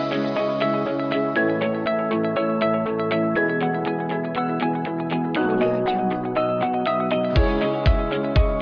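No technical faults can be heard anywhere in the recording. Nothing in it calls for a time stamp or an explanation of something having gone wrong.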